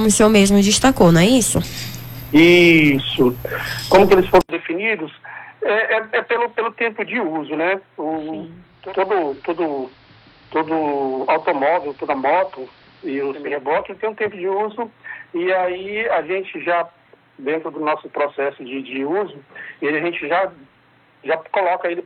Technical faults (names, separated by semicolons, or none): input switched to a poorer device; digital radio blending to analogue